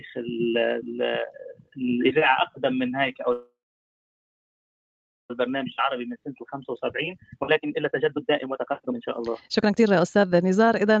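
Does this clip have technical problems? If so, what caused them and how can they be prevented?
Yes. Three faults can be heard.

Sound cut by the noise suppressor, 1.54 to 1.74 s: the suppressor mistook part of the sound for background noise and pulled it down harder than its surroundings, by about 12 dB at the deepest point, over around 150 ms in total. The affected passage sinks in level. Prevent it by using gentler suppression or tuning the suppressor so it does not treat steady or decaying sound as noise.

Call audio freeze, 3.32 to 5.31 s: the sound stops for nearly 2 s. The receiver stretched the last moment into a short fading buzz or hiss and then held silence for about 1.75 s before the audio resumed exactly where it had left off. Nothing is lost, but a gap of almost 2 s is inserted, and the delay grows by the same amount. The likely cause is packets stalled in transit that left the jitter buffer empty. 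Prevent it with a more stable network path, or use wired links and prioritise call traffic.

Jitter buffer speed-up, 5.47 to 10.97 s: the buffer held far more audio than its target. The receiver worked the excess off by repeatedly cutting out tiny pitch-period-sized pieces, removing roughly 2 s in total. Over this stretch the sound plays at about 134% speed at unchanged pitch, so it sounds rushed and loses its natural pacing. Prevent it by avoiding the delay bursts that cause the backlog, or by configuring the receiver to catch up more gradually.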